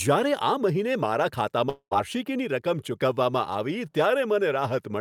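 From 1.69 s to 1.93 s the speech gives way to a buzzy continuation of the last sound that fades, followed by about 80 ms of silence, before the speech resumes further along with roughly 220 ms missing. This is most likely a long network dropout, where the receiver papered over missing packets until its concealment ran out. A buffering stall would resume exactly where it stopped, and a brief packet-loss glitch would not decay into silence.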